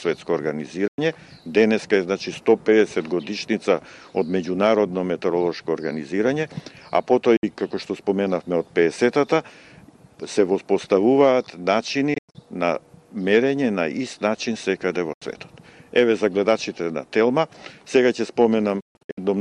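Five holes cut the audio: 0.88–0.99 s (about 0.10 s), 7.37–7.44 s (61 ms), 12.14–12.35 s (163 ms in broken bursts, longest 0.10 s), 15.13–15.22 s (81 ms) and 18.80–19.18 s (305 ms scattered, longest 0.14 s). These are likely Bluetooth dropouts, where late packets were discarded. Sound stops dead and resumes as if it had kept playing. Waveform and spectrogram show flat, empty gaps with sharp vertical edges, their lengths pointing to lost packets of about 20 ms each.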